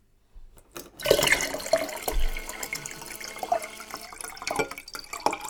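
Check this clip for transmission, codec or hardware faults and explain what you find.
One hardware interference fault is present. From 1.59 s to 4.07 s there is GSM phone buzz: a nearby 2G handset on a call pulses at about 217 Hz. The audio circuitry rectifies those pulses into a steady, raspy, harmonic-rich buzz about 19 dB below the signal.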